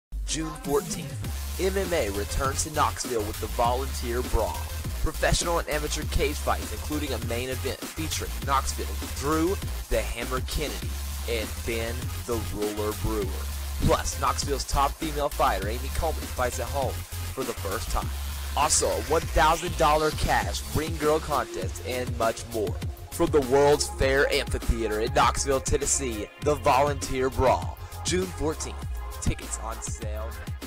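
No technical faults are audible anywhere in the clip.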